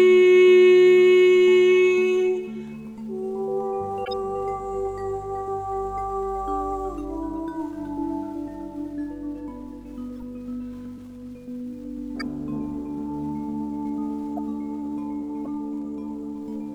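Corrupt frames decoded cause brief chirps or noise blips at 4.05–4.13, 10.17–10.23, 12.19–12.27, 14.37–14.39 and 15.45–15.47 s. Damaged compressed data was decoded anyway, misplacing energy in frequency. Unlike dropouts, which leave gaps, these add stray sound, the 10.2 s one much fainter.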